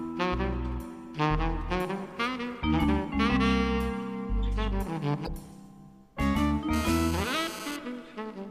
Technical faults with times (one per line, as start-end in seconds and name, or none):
5.24-5.28 damaged data in a compressed stream
6.73-7.76 GSM phone buzz